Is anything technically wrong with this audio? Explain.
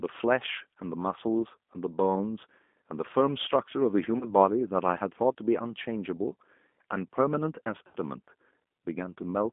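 Yes, there are two problems. The whole clip has been through the G.729 codec, probably G.729A at 8 kbit/s. The speech is squeezed into roughly 200 Hz to 3.5 kHz and rebuilt from a vocal tract filter plus a few pulses per frame, so it sounds plainly rough, thin and a bit synthetic.

There's also VoIP packet loss concealed by the speech codec, at 1.39 s (10 ms), 4.19–4.25 s (about 20 ms) and 7.87–7.96 s (about 70 ms). The decoder fills each gap by stretching its last pitch and filter at falling gain, so you hear buzzy, smeared bits, worst at 7.9 s.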